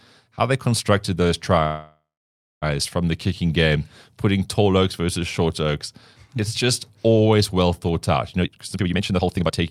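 After "how they constructed those", from 1.65 to 2.64 s, the last sound stretches into a fading buzz, then about 0.59 s of silence. Speech resumes intact at "from the kicking game", so nothing is lost, unlike a dropout. This is likely a call audio freeze from delayed packets.

From 8.37 to 9.59 s, after "always well thought out", speech rushes at about 169% speed with unchanged pitch. This jitter buffer speed-up trims roughly a second of pitch periods, so it is faster without sounding chipmunk-like.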